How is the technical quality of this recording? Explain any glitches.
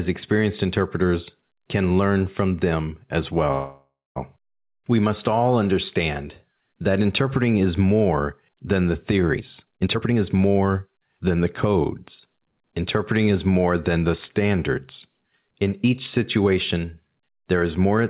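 The recording has two call-related glitches, and it is band-limited with nothing above 4 kHz, which points to a narrowband telephone codec such as G.711.

From 3.52 to 4.18 s, right after "learn from them as", there is a call audio freeze. Packets were likely held up, so the receiver stretched the last sound into a fading buzz or hiss. The final 0.23 s are silent. Speech resumes 0.64 s late, with nothing lost. On a spectrogram it appears as a smeared, decaying band followed by a blank strip.

From 9.33 to 11.41 s, after "is more than the", a jitter buffer speed-up runs the speech at about 130% while keeping its pitch. Roughly 0.7 s of audio is removed in small pitch-period cuts. It sounds hurried, and the waveform looks compressed in time while the harmonic spacing stays unchanged.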